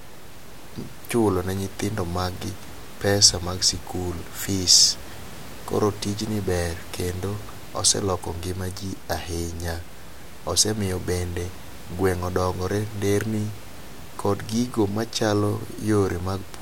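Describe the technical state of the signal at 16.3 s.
At 16.3 s the speech signal is intact, with only the room's own background noise audible about 17 dB beneath it as part of the recording.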